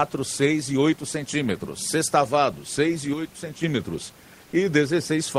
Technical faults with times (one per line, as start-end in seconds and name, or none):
3.13-3.63 sudden gain jump
4.44-4.52 comfort noise in place of the background